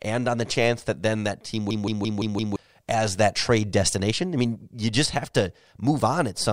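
Speech runs normally until a system hang loop takes over from 1.71 s to 2.56 s. A 0.17 s slice of audio repeats exactly five times, at about 5.9 per second, giving a machine-gun stutter. The driver froze while the hardware kept replaying its ring buffer, whose length fits an 8192-sample buffer, and roughly a second of speech is lost. On a waveform or spectrogram, identical blocks sit side by side with hard seams at each repeat.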